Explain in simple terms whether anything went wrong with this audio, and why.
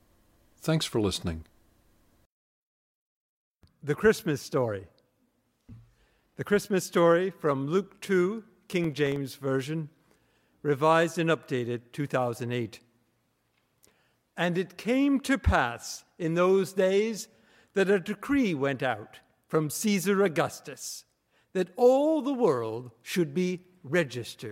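From 8.84 to 9.16 s there is processor overload crackle. The computer kept missing its deadlines, leaving about ten tiny silent gaps that sound like gritty crackling.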